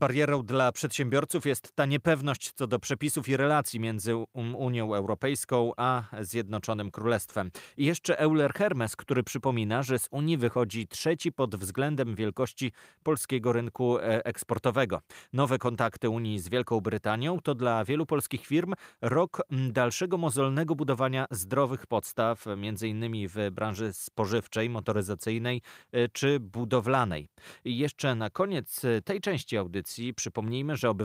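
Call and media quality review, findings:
Nothing stood out on a full listen to this speech recording.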